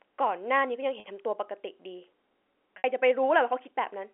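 At 1.0 s and 2.78 s, packet loss with pitch repetition fills 40 ms and 60 ms gaps with a looped pitch period. The first is a brief buzzy hold rather than a silent dropout, while the second fades into silence before the speech returns with a short cross-fade.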